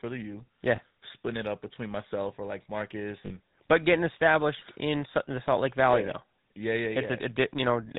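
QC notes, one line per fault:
throughout: GSM full-rate codec. The speech carries the gritty, buzzy roughness of the original GSM coder, which rebuilds each short stretch from a vocal-tract filter excited by a sparse, regular pulse train rather than the real waveform. Discarding two of every three excitation samples leaves a grainy edge on voiced sounds, and nothing survives above 4 kHz, so the top end is dull and sibilants lose their sharpness. The damage is plainly audible, and the sound fits the 13 kbps full-rate mode.
0.76–0.80 s and 3.26–3.31 s: lost GSM frames. At both points the speech briefly freezes into a rough, metallic ring instead of moving on. When a frame is lost, the decoder reuses the parameters of the last good frame, so the same coarse timbre is held rather than the true sound. The first gap covers about 20 ms, the second about 40 ms, which fits one and two dropped 20 ms frames. 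Both are too short to fade to silence.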